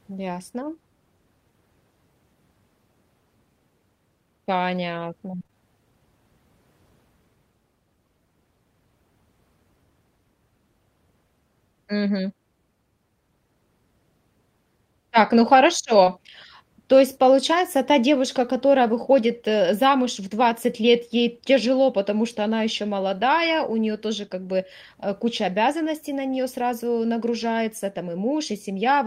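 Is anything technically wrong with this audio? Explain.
Yes, two stretches of the speech show packet loss.

Repeated packet loss (robotic sound), 5.31 to 5.56 s: six gaps, the longest 23 ms, drop about 120 ms of audio. Each hole is filled by extending the preceding sound, so nearly half this span is synthetic, and it turns choppy and robotic.

Short concealed packet loss, 16.03 to 16.08 s: about 20 ms never arrived in time. The decoder continued the last sound to cover it, then blended back into real audio, leaving a brief smear or wobble.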